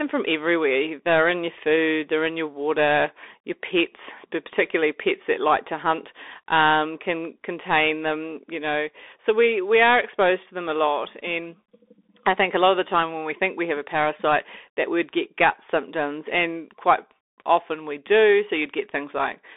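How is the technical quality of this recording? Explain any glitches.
The recording has poor technical quality, with Bluetooth CVSD headset codec damage throughout. The speech is confined to roughly 300 Hz to 3.6 kHz, with nothing above 3.8 kHz, consistent with a 64 kbps CVSD link. Each sample is coded as a single up-or-down step whose size adapts. Fast, loud high-frequency content outruns the step, so s sounds turn scratchy, and a granular hiss sits under the speech.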